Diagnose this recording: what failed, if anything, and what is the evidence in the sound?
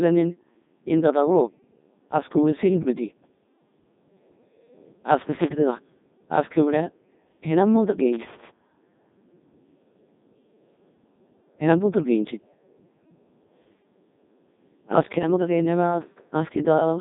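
It's the codec stage. The speech has the robotic buzz of the Codec 2 vocoder throughout, which fits its 3.2 kbit/s mode. It's rebuilt from sine waves driven by pitch, voicing and envelope, within 150 Hz to 3.7 kHz, with nothing above 3.8 kHz.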